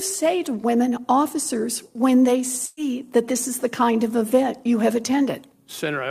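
At 2.65 to 2.80 s the speech breaks in a burst of packet loss. About 120 ms of audio never arrived, and the receiver stretched the last sound over the gap, turning it down, rather than dropping to silence, then jumped ahead.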